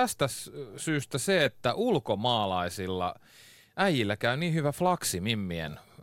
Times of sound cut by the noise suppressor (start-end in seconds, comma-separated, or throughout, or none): none